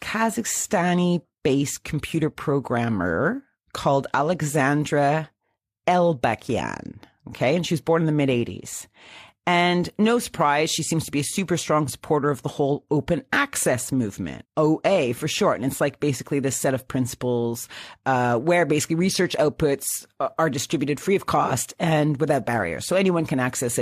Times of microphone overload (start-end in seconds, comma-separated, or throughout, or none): none